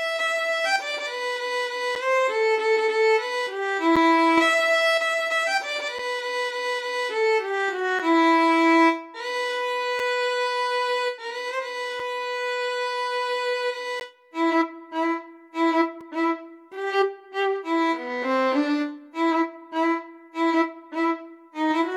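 At 1.95, 3.96, 5.99, 7.99, 9.99, 12.00, 14.00 and 16.01 s the audio drops into brief silences with hard edges, the gap between stream segments fault. Successive 2-second segments don't quite meet in time, so the player inserts silence of about 3 to 13 ms, the longest at 14.00 s. Unlike packet-loss dropouts, nothing is missing: the sound resumes exactly where it stopped, and the holes arrive at a steady two-second rhythm.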